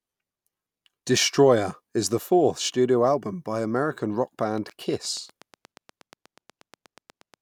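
From 4.58 to 7.35 s, steady ticking at 8.33 per second, roughly as loud as the speech: a train of clicks, likely interference or a faulty connection.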